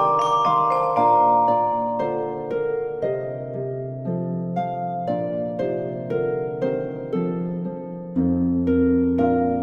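No technical faults can be heard in this music.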